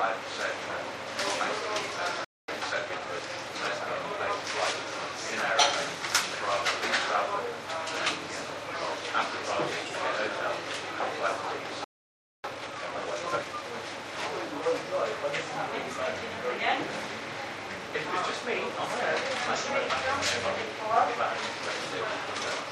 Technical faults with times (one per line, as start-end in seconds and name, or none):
2.24-2.48 playback stall
2.48-4.84 time-compressed catch-up
11.84-12.44 playback stall
12.44-13.62 time-compressed catch-up